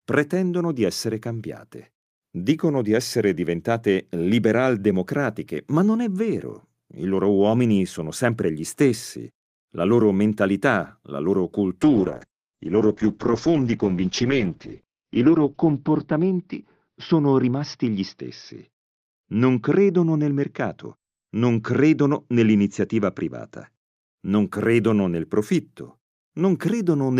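Call bitrate drop, 11.82 to 23.87 s: the encoder starved of bits, likely falling from about 48 to 8 kbps, codes coarsely and cuts the top from 20 kHz to 6 kHz, muffling the speech before it clears.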